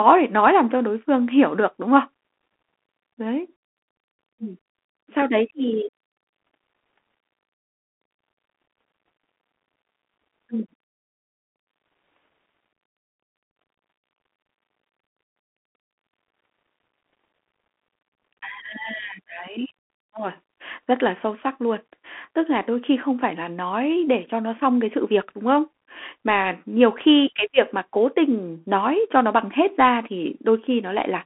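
Bluetooth CVSD headset codec throughout: one-bit up-or-down steps with adaptive size leave nothing above 3.8 kHz, plainly audible scratchy s sounds and granular hiss.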